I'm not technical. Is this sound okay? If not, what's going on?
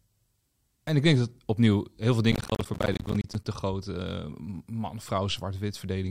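No. From about 2.32 to 3.45 seconds, the speech is broken up by a burst of crackle, a rapid run of tiny dropouts that gives it a torn, gritty texture before it clears. This is processor overload crackle: the computer was too busy to deliver each small slice of audio, around 10 milliseconds long, on time. It missed dozens of those slices again and again over that stretch, and each missed one became a brief gap of silence.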